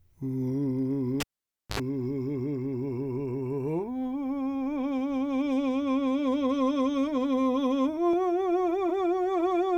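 At 1.20 s the music cuts out with a pop as a live cable is pulled and plugged in again. For about 543 ms the signal falls to near silence. As the plug goes back in, only the tip makes contact at first, so a burst of 50 Hz mains buzz lasting about 74 ms comes through before the ground connects. A second pop marks full contact, and the music returns at 1.80 s.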